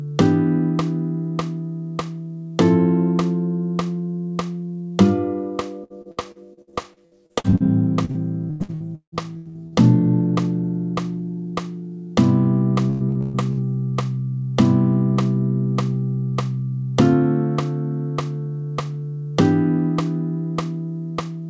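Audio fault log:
5.84–7.63 s, repeated packet loss (robotic sound): choppy stutter with pieces missing. Thirteen gaps, the longest 60 ms, each patched by stretching the last sound before the next hole arrives, so about a third of this stretch is concealed rather than real audio.
8.05–9.75 s, repeated packet loss (robotic sound): the same robotic, broken texture. Ten gaps, one as long as 170 ms, are each filled by continuing the previous sound, leaving close to 40% of the span as concealment instead of original audio.
12.90–13.60 s, repeated packet loss (robotic sound): short burst of choppy sound. Four gaps, the longest 124 ms, are bridged by repeating what came just before, so about half of this span is patched filler, heard through a call path that stops at 8 kHz.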